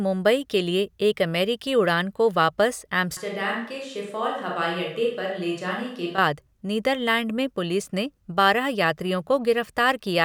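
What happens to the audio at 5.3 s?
At 5.3 s the audio is inside a switch to a distant microphone, running from 3.17 s to 6.18 s. The close microphone's feed has likely dropped out, leaving only a pickup farther from the talker. The speech abruptly turns roomy and hollow and loses its low end. It falls by about 5 dB, and more background noise comes up, sitting roughly 35 dB under the speech, until the close sound returns just as suddenly.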